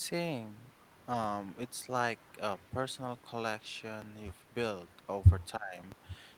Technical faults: DC step; speech suppressed in double talk

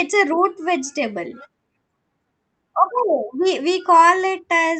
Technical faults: none

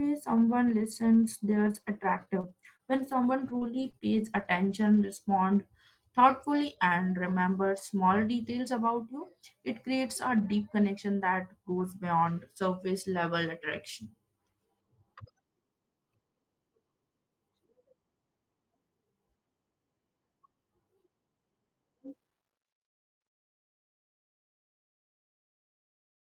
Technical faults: scattered short gaps

